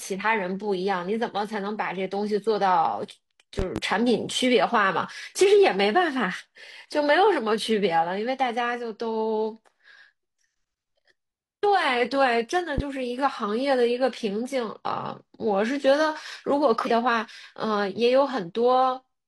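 Between 3.59 and 3.80 s, then at 12.78–12.82 s, loud pops, two and then one, about 10 dB above the speech, likely from switching or static spikes, show as tall vertical spikes.

At 16.81–16.87 s, compressed frames skipped: the speech jumps ahead around 200 ms, fitting five 46.4 ms frames, with a visible discontinuity.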